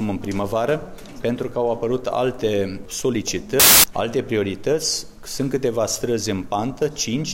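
From 3.60 to 3.84 s, samples built from the wrong bytes turn the sound into a burst of loud, harsh broadband noise: the bytes in each sample were combined in the wrong order or offset, so the low bits dominate. A waveform shows dense hash; a spectrogram shows a broadband block.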